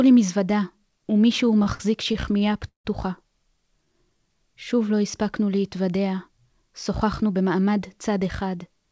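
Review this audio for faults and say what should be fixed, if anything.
Repeated stalls (stutter) run from 1.46 to 2.87 s: packets arrived late, so the jitter buffer kept running dry. Across ten gaps the receiver stretched the last sound to fill 329 ms, the longest 164 ms, which is about 23% of that stretch. Unlike packet loss, nothing drops out. The audio just drags and catches. A deeper or more adaptive jitter buffer, or a steadier network path, would prevent it.

A jitter buffer slow-down runs from 3.85 to 4.29 s. To rebuild its reserve, the receiver repeated pitch periods and added 63 ms, so playback runs at 88% speed. The pitch stays put, which separates it from a sagging playback clock that would also drop the pitch. Avoiding buffer underruns in the first place would remove the need for this.

A jitter buffer speed-up runs from 6.29 to 7.79 s. After a backlog built up, the receiver trimmed short pitch-period chunks, about a tenth of a second in total, and the audio runs at 107% speed and sounds hurried. 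Unlike a sample-rate mismatch, the pitch does not rise. Smoothing packet delivery so bursts don't overfill the buffer would prevent it.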